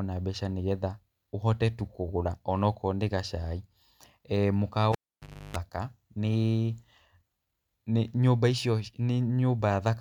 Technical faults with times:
4.92-5.57 cable pulled and plugged in

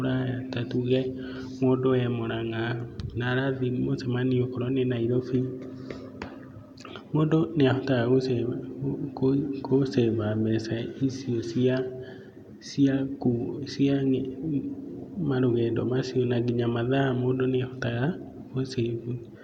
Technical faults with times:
none

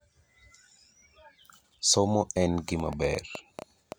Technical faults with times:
2.80-3.93 train of clicks

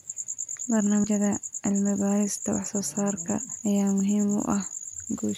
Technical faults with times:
1.04 compressed frames skipped

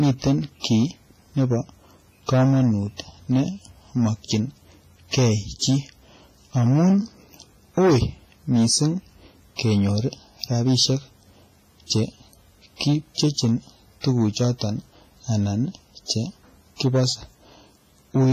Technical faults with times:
0.00-18.32 hard clipping
0.00-18.32 WMA compression
14.01-14.04 pre-echo

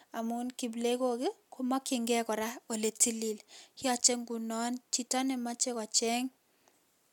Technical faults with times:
none

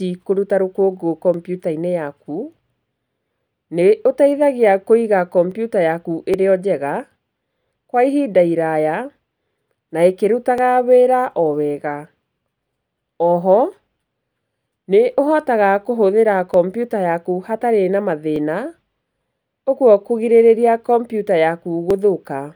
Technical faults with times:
1.34 dropped samples
5.51 dropped samples
6.34 dropped samples
10.58 dropped samples
16.54 dropped samples
18.36 dropped samples
21.90 dropped samples

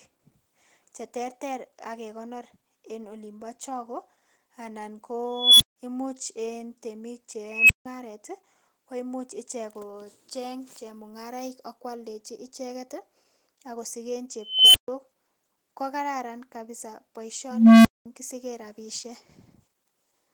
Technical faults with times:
0.00-20.34 Opus voice compression
5.32-5.76 unstable filter
7.49-7.86 unstable filter
14.40-14.88 unstable filter
17.51-18.06 unstable filter

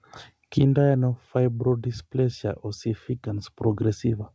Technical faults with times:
none

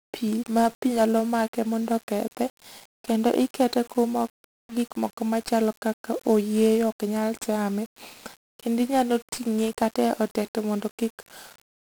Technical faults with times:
0.00-11.89 1-bit DFPWM compression

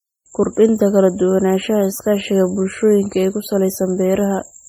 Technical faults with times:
0.00-4.69 transcoding between lossy codecs

